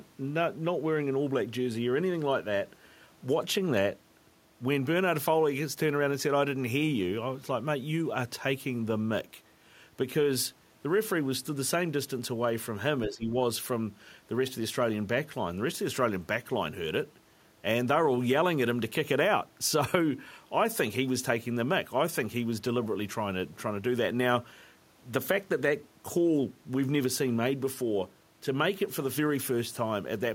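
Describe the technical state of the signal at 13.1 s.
At 13.1 s the speech sinks, losing roughly 10 dB, then comes back at 13.34 s after a dip of about 0.3 s that began at 13.05 s. That dip is speech suppressed in double talk. The likely cause is that both ends spoke at once, so the echo canceller could not tell the near talker from loudspeaker echo and pulled both down during the overlap.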